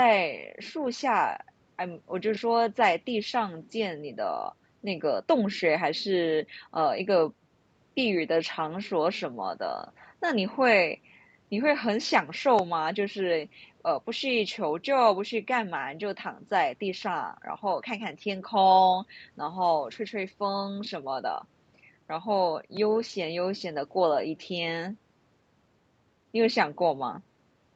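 Nothing stood out on listening to this speech clip.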